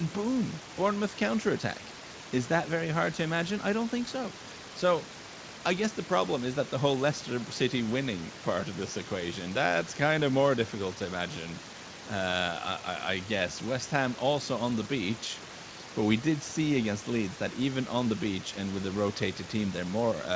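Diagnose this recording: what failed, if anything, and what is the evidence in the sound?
Nothing in this speech recording points to a failure at any stage: the room noise sits about 18 dB under the talking, the missing content above 8 kHz is just the call's normal microphone processing, and the light Speex coding is what you'd expect from a call at this quality.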